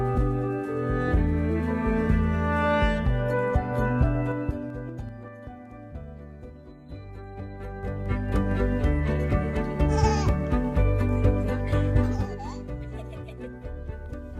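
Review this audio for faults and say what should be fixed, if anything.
Zipper noise at 4.22–5.32 s, 7.26–8.56 s and 12.02–12.38 s: the level moves in unsmoothed 3 dB jumps, about 15 dB down, then about 15 dB back up, then about 10 dB down at a quicker rate. Each jump leaves a small click, so the fades tick audibly. Ramping the gain smoothly per sample, rather than switching it per block, would prevent this.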